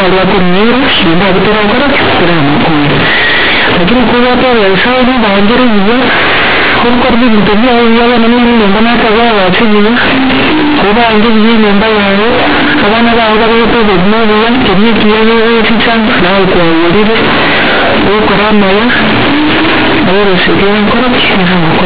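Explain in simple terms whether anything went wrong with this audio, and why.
Yes, something went wrong the whole way through: it's a case of companded audio read as linear. The speech was stored as A-law telephone bytes, but the player treated them as plain 8-bit samples without expanding them, so quiet bits blow up as loud as loud bits, giving harsh, buzzy distortion and heavy noise in the pauses.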